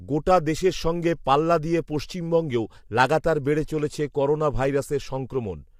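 Throughout this speech clip the voice sounds rough and grainy, with a hiss filling the gaps between the harmonics and a top band that sounds thin and artificial. The damage is plainly audible from start to finish. It is likely low-delay AAC compression (AAC-ELD), a codec whose very short frames can't separate closely spaced pitch harmonics. At a rate that fits roughly 32 kbps, too few bits remain to encode them cleanly.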